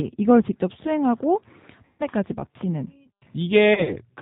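Throughout, the speech carries G.729 codec damage: nothing above 4 kHz, with a rough, synthetic edge that fits an 8 kbit/s pulse-based coder rather than simple band-limiting. At 1.85 to 2.03 s, VoIP packet loss concealed by the speech codec stretches about 140 ms of missing audio into a buzzy tone or coloured noise that fades. Unlike a dropout to silence, the decoder keeps extrapolating the last pitch and filter. At 3.74 to 3.96 s, about 70 ms is lost in short gaps scattered over 160 ms, the longest run 30 ms, giving brief smears and weakened sound as each frame recovers from the last.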